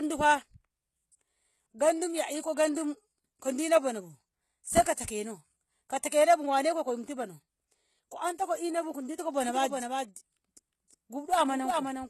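Throughout, the sound is band-limited with nothing above 12.3 kHz and plainly audible coding damage, likely from HE-AAC compression. The upper band looks copied upward on a spectrogram, and its harmonics don't line up.

From 9.49 s, just after "ko inabu ko dingo", to the end, a doubled audio track appears. A full-band copy about 5 dB quieter trails by roughly 0.4 s, likely from a second, slower capture path. It starts abruptly, and each waveform burst repeats without decay.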